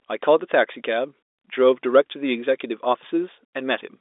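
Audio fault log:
No faults detected.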